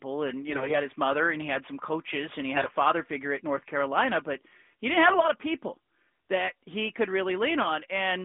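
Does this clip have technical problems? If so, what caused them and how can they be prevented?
Yes. AMR bit errors make the speech hoarse and gargly at 0.48 to 0.79 s (just before "his mother and he"), 2.56 to 2.73 s (between "some coaches and he" and "figure at") and 5.06 to 5.27 s (between "but he didn't" and "of people that he"). A weak radio link flipped the lightly protected bits in the 12.2 kbps AMR-NB frames, at error rates on the order of a tenth of the bits, misplacing excitation pulses and corrupting fine pitch, gain and spectral values. The waveform keeps roughly its level, but the spectrogram shows harmonics breaking into grainy noise below about 3.6 kHz. Stronger channel coding, or better radio coverage, would prevent it.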